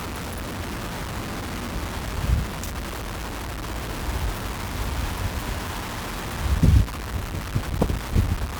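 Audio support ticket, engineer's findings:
Low bit depth without dither, throughout. Grainy, gritty distortion riding on the sounds, changing with each sound and strongest as levels fall. Quietest passages sputter between steps or drop to silence. Error noise only about 10 dB under the signal. Likely cause: truncation to roughly 5 bits with no dither, so the rounding error tracks the waveform instead of forming a steady hiss.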